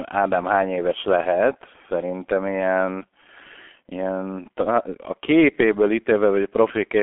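G.723.1 codec damage runs through the whole of this speech clip. The narrow telephone band of roughly 300 Hz to 3.4 kHz and the absence of anything above 3.8 kHz, together with heavy muffling, hoarseness and smeared consonants, point to a coder running near 6 kbit/s.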